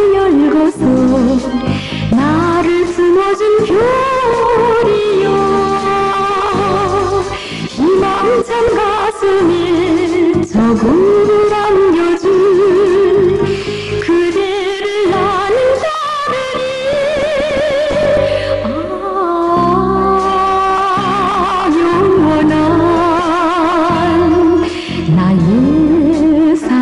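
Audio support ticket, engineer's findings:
Nothing stood out on listening; no faults found to log against this ticket.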